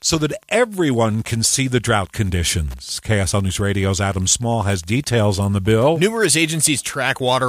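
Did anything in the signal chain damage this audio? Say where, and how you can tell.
Yes. Wi-Fi interference runs through the whole speech clip, so the damage entered in the analogue wiring. A steady tick recurs every 102.4 ms, about ten a second, sitting roughly 35 dB below the speech. That spacing is the Wi-Fi beacon interval. A nearby radio's transmissions are being picked up and rectified by the analogue circuit, which turns each beacon burst into an audible tick.

Clock slip clicks run from 0.11 s to 7.46 s. Faint ticks come about every 40 ms, some two hundred in all, which is fast enough to form a soft rattle under the speech. The likely cause is two converters or devices running on unsynchronised clocks. An error of around 500 ppm fits that rate. Each time the drift adds up to one whole sample, a sample is dropped or repeated, and that discontinuity is the click.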